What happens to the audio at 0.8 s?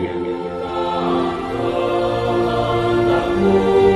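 At 0.8 s there is a steady buzz at 100 Hz riding on the sound, present only where signal is, and it runs through the whole clip. The resampler restarted on every block: each 10 ms block was converted from 44.1 kHz to 48 kHz alone, leaving an error at every block edge.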